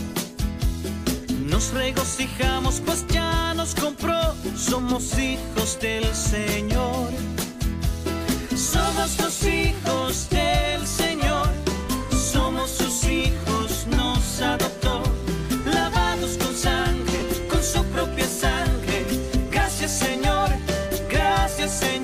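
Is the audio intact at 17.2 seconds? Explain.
No. Lost LE Audio frames cut in from 17.20 to 17.22 s, a 20 ms gap that fits two 10 ms LC3 frames. The decoder filled it by repeating the last spectrum with random signs, so tones smear into noise. A spectrogram shows a brief blurred vertical band, and the waveform shows a short patch of noise-like texture.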